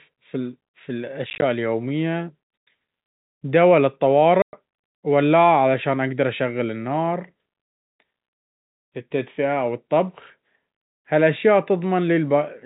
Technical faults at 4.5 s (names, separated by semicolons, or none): packet loss filled with silence